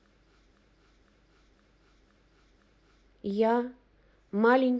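A system hang loop froze this speech clip: the computer or its audio driver stopped supplying new data while the sound hardware kept replaying the same ring buffer. From 0.51 s to 3.07 s a single 512 ms piece of speech repeats exactly, five times, at about 1.95 Hz, which fits an 8192-sample buffer. Because the buffer is this long, the effect is a slow, rhythmic stutter rather than a buzz, and little or nothing of the recording seems to be lost.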